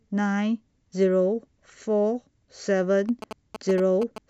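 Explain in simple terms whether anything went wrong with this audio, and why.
Near the end of this speech clip, from about 3.09 to 4.18 seconds, a galloping dit-dit-dit of short buzzes cuts in, fairly loud against the voice. These are GSM signalling bursts: a nearby 2G mobile phone was sending brief groups of radio pulses, as it does before a call or text comes in. The audio equipment picked up that radio energy and turned it into sound, giving buzzes pulsing at about 217 times a second.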